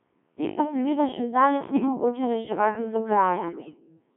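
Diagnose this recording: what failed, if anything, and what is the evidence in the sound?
The whole clip passes through a Codec 2 vocoder, at the codec stage. The speech sounds robotic and buzzy throughout, with heavy coding damage and a band of about 200 Hz to 3.4 kHz. The 1.3 kbit/s stream carries only pitch, voicing, energy and a spectral envelope. The decoder then rebuilds the voice from sine waves, so none of the original waveform survives. Sounds that are not a single voice get mangled.

Bit errors on digital voice radio occur at two points in transmission over the network. The first runs from 1.73 to 1.88 s and the second from 3.48 to 3.80 s, which is the longer and worse burst. In each burst the synthetic voice jumps in pitch, level and tone and breaks into warbles and gibberish. At this low bitrate a single flipped bit sets a parameter for a whole frame, so the damage fits roughly 7 to 10 percent of bits corrupted across several frames.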